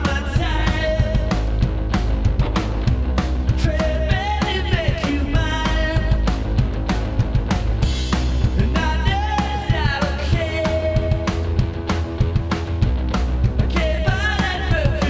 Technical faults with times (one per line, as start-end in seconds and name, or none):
none